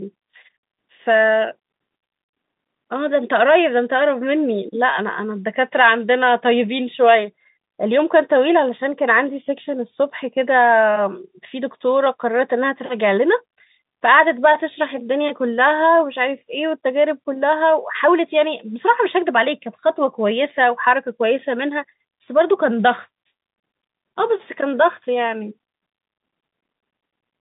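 Nothing's wrong with this bit of speech; it's just ordinary G.711 telephone coding, so the sound sits in the usual phone band of roughly 150 Hz to 3.7 kHz with nothing above about 3.8 kHz, and that narrow, phone-like quality is simply how the format sounds.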